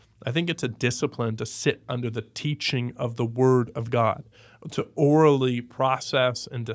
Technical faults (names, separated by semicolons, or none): none